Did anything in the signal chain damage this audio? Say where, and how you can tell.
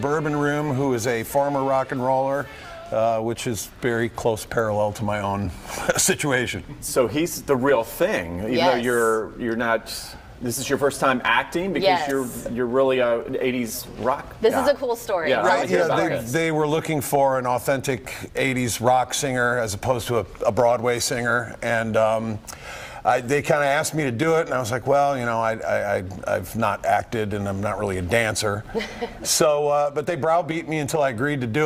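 No, nothing in the signal chain left an audible mark on this audio, which holds steady and intact at every stage from capture to playback.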